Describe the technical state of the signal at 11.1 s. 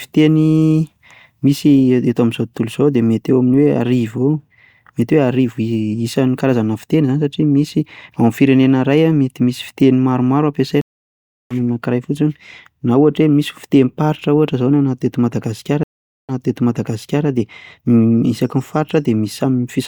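The signal is silent at 11.1 s, inside a stream reconnect gap running from 10.81 to 11.54 s, just after "mety misy fiteny maromaro". The connection dropped, playback stopped, and the player reconnected and started a new decoder mid-stream. The gap lasts about 0.69 s. When sound returns, the speech picks up roughly half a second further on, so that part is skipped, and the first frame comes in fading up.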